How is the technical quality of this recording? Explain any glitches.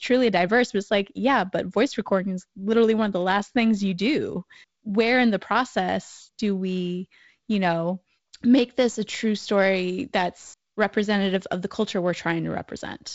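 No glitches or faults heard.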